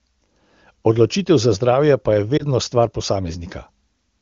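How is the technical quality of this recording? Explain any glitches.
One glitch stands out in this speech recording, carried over the AMR wideband (HD Voice) codec, whose clean sound points to one of its higher rates.

From about 2.37 to 2.43 s there is a lost AMR speech frame. A radio error corrupted the frame so it failed its checksum, and the decoder filled the gap by repeating the last good pitch and vocal tract settings at reduced gain. The gap fits a single 20 ms frame, so the result is a brief dip or warble before the voice resumes, momentarily weaker or rougher.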